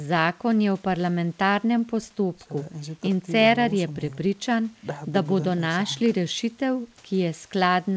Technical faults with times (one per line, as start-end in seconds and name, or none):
none